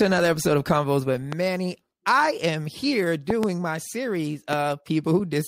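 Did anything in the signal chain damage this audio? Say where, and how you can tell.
Yes. A sudden voltage step, likely from a plug, switch, static discharge or driver glitch, was added at 1.33–1.35 s, 3.30–3.46 s (two pops) and 4.53–4.55 s. The result is a loud pop, roughly 15, 15 and 10 dB above the sound, which continues underneath.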